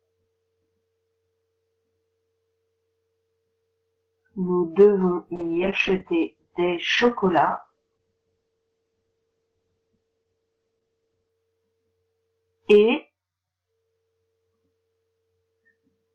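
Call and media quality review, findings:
Call bitrate drop, 5.36–11.41 s: audio turns coarse and muffled, top end cut from 20 kHz to 8 kHz, floor held about 6 s. Probable component: Opus encoder following a collapsed bandwidth estimate. The sound fits a fall from around 128 kbps to about 10 kbps, with band-limiting at the low rate. Quality recovers at 11.41 s.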